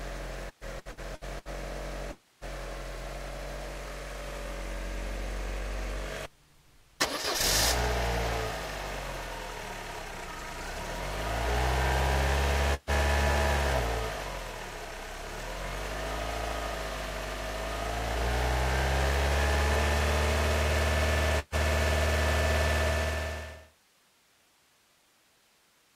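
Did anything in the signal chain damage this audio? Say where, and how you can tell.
Yes. From 0.49 to 1.48 s the sound turns choppy and robotic. Seven short holes are patched by repeating the previous sound. This is repeated packet loss on the network, with about 360 ms lost and the longest gap 117 ms.

At 2.11 s the sound smears into a fading buzz or hiss, then goes silent for about 180 ms before returning at 2.44 s. About 300 ms is missing, most likely from a long network dropout.

At 12.74 to 12.90 s and 21.39 to 21.55 s, the last sound is briefly held and fades, and the sound resumes with about 120 ms missing each time. These are bursts of packet loss, concealed by the receiver.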